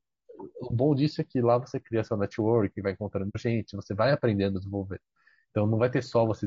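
AAC frame loss with muting at 3.29 to 3.37 s breaks this speech recording with a soft-edged gap about 80 ms wide. The decoder had nothing to play for that stretch and output silence, and its overlapping windows fade the sound out before the gap and back in after it. The size of the hole fits two lost frames, around 60 ms of missing audio. Low-delay AAC compression runs through the whole clip as roughness and graininess in the voice. Noise sits between the pitch harmonics, and the top band sounds thin and synthetic. This damage is plainly audible. The likely cause is AAC-ELD, the low-delay codec used in video calls, at a low rate that fits something like 32 kbps. At that rate too few bits are left to code the harmonics cleanly.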